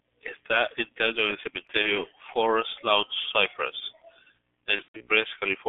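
From start to finish the speech carries the sound of the G.723.1 codec, heavily damaged. Energy sits only between about 150 Hz and 3.5 kHz, which fits a 6.3 kbit/s G.723.1 stream. The slowly updated voice model leaves the speech muffled and hoarse, with smeared consonants. On a spectrogram the top edge is hard and flat, and formant bands look blocky in 30 ms steps.

Just after "enterrado en el", from 1.82 to 1.94 s, VoIP packet loss concealed by the speech codec briefly takes over. The gap fits one lost 30 ms frame. The decoder repeats its last pitch and filter, so a short, fading stretched sound replaces the speech, and the voice stays weak for a short while after. The waveform dips in amplitude.

A worse concealment stretch runs from 4.76 to 5.09 s. About 180 ms went missing, scattered over 240 ms, with the longest unbroken hole lasting 120 ms. There the sound is stretched out, fades and then mutes, then stumbles back in weak and distorted. 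A spectrogram shows the stretched sound fading out, and the waveform shows a tapering envelope.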